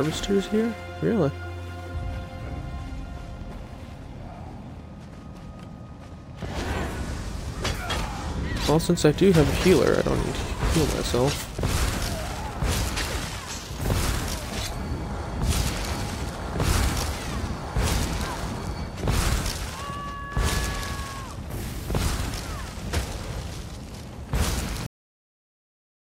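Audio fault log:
24.86–26.17 s, cut-off end: the sound halts abruptly mid-event at 24.86 s and drops straight into digital silence with no decay for the final 1.3 s. The closing buffers were never written or played, so the audio simply stops.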